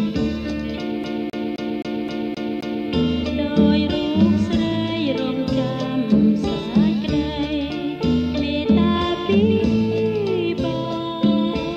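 From 1.04 s to 2.87 s the audio gets caught in a CD stuck on one turn. A scratch keeps throwing the laser back one track, so the same 262 ms section repeats seven times. A brief mute marks each jump. The result is a fast, even stutter.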